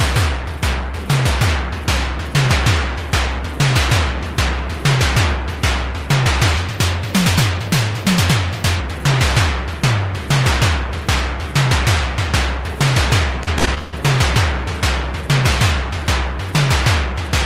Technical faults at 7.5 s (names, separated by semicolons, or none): section at the wrong speed